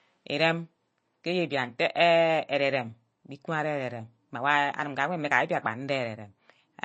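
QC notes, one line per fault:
Throughout: MP3 compression. The speech has a hard ceiling at 8.3 kHz with nothing above it, and the upper band has a watery, swirling quality as faint detail drops in and out between frames. Sibilants sound metallic and attacks are smeared. The cause is likely a low-bitrate MP3 encode, which fits a rate around 32 kbps. On a spectrogram this shows as a flat cut-off line with scattered, flickering holes beneath it.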